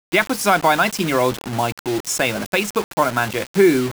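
Low bit depth without dither runs through the whole of this speech clip: the sound is grainy and gritty, and the distortion shifts with the signal rather than sitting underneath it as a steady hiss. Quiet passages and decaying tails break up most, sputtering between steps or dropping to silence. The rounding error sits only around 15 dB below the signal. This fits the audio likely having been rounded to about 5 bits with no dither to decorrelate the error.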